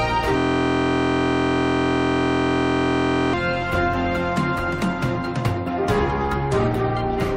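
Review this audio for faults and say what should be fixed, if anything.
A system hang loop runs from 0.38 s to 3.34 s. The sound freezes into one short fragment. That fragment, 23.22 ms long, repeats exactly over a hundred times. The result is a steady buzz at about 43.1 Hz. The host or driver stalled while the audio hardware kept replaying the same ring buffer. The loop length fits a 1024-sample buffer. To prevent it, add a watchdog that mutes or fills silence when the buffer stops being refreshed.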